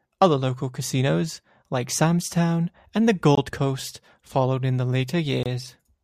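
At 3.35 s, just after "and the", the speech drops to silence for about 23 ms and resumes at 3.38 s. A second gap follows at 5.43 s, lasting about 25 ms until 5.46 s. Each sounds like a sudden hard dropout, not a fade. The pattern points to a Bluetooth stall, likely caused by interference. Packets arrived late, the receiving buffer emptied, and playback paused until the delayed audio caught up.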